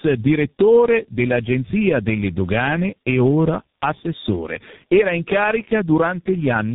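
Throughout, the speech carries tandem speech coding: each low-rate coder re-encodes the previous one's damaged output, which fits a chain ending in G.723.1. It sounds rough, muffled and warbly; a spectrogram shows nothing above 3.8 kHz and smeared, blotchy formants.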